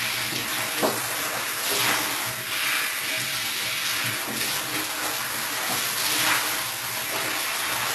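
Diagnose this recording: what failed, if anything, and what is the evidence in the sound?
Throughout, the top end sounds bright but synthetic, with gritty, metallic treble that doesn't blend with the body of the sound, and nothing at all above about 12.3 kHz. At the codec stage, this is likely HE-AAC compression, at a low rate that fits roughly 16 kbps, rebuilding the treble by copying lower bands upward.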